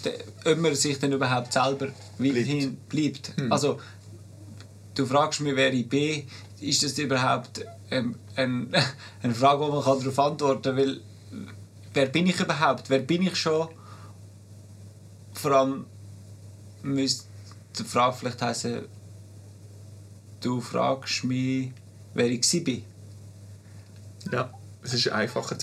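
No technical faults can be heard anywhere in the audio.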